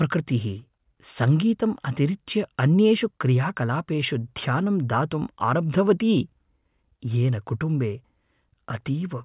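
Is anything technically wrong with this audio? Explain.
No technical faults are audible.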